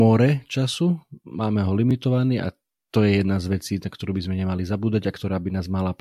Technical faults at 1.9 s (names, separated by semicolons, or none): block of digital silence